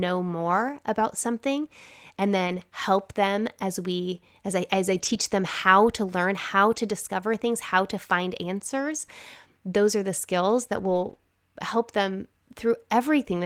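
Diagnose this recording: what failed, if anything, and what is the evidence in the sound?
Short rough, noisy patches with no break in the speech occur at 2.47–2.57, 4.93–5.19, 6.71–6.77 (right after "how to learn how"), 8.79–8.81 and 10.73–11.15 s. This is network loss, each lost packet rebuilt from error correction: the decoder played the low-bitrate copies carried in later packets.

A brief smear lands at 11.17–11.21 s, just before "help them." About 20 ms of audio reached the decoder too late. This is short concealed packet loss: the receiver extended the preceding sound across the hole, then blended back into the real audio.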